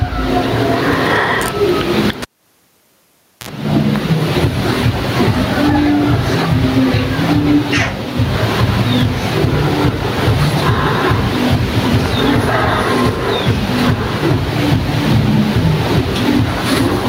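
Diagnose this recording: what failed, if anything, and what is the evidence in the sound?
Throughout the speech, the level swings by around 15 dB, so the dynamics sound squashed. This gain pumping is likely from input gain set far too high, with a fast limiter or compressor clamping each peak.

At 2.22 s a pop is followed by near silence lasting about 1.22 s, then a 54 ms burst of 60 Hz mains buzz and a second pop as the sound returns at 3.49 s. This is a fault in the analogue wiring: a cable was pulled and plugged in, with the buzz coming while only the tip made contact.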